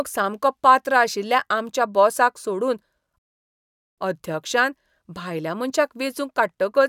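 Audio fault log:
3.18–3.98 s, rebuffering stall: the speech halts into silence for about 0.79 s, then picks up again at exactly the point where it broke off. The player drained its store of downloaded audio and had nothing left to play, so it waited until fresh data arrived before continuing. Because playback simply paused rather than skipping ahead, no speech goes missing; the gap only stretches the clip's running time by that same 0.79 s.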